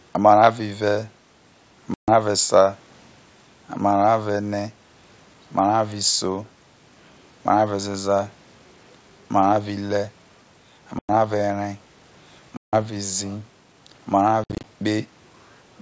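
Packet loss on an ADPCM call breaks up this speech recording four times: packets dropped at 1.94–2.11 s (140 ms lost), 10.99–11.10 s (100 ms), 12.57–12.76 s (160 ms) and 14.44–14.65 s (130 ms scattered over 200 ms, longest run 60 ms). Each gap is filled with hard-edged silence. The decoder's adaptive predictor and step size then lose track of the sender's, so speech comes back slightly distorted until it resynchronises, over a wideband path that fits 64 kbit/s G.722.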